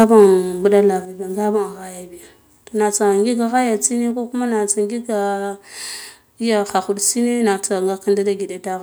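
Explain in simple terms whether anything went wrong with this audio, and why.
From the start to 0.25 s, the loudest parts of the speech sound harsh and crackly, likely microphone overload, where peaks exceed the recorder's limit and get flattened. At 0.04 s and again at 1.05 s, the voice and background abruptly drop in loudness, likely the microphone volume stepped down by the call software in response.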